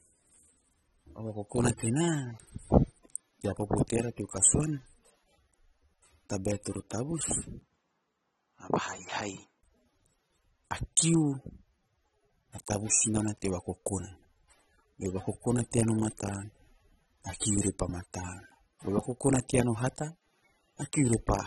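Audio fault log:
throughout: AAC compression. The speech was likely squeezed through a low-rate AAC-LC encoder, and the damage is plainly audible. The encoder pulled its cut-off down so that nothing survives above 11.8 kHz, which fits a bitrate of around 27 kbps. With so few bits to share, it coarsely quantises the remaining frequency lines against its hearing model, leaving the voice dull and smeared, with a warbling, fizzy edge on sustained sounds and sibilants.
7.59 to 9.63 s: input switched to a poorer device. Partway through, the recording likely jumped to a weaker microphone or a headset's call profile and then back again. A short gap of about 20 ms of silence marks the change. The new path passes nothing above 7.6 kHz, so the speech turns noticeably narrower and boxier. It also drops in level by around 5 dB and brings its own faint background noise, sitting far below the voice, until the original input returns.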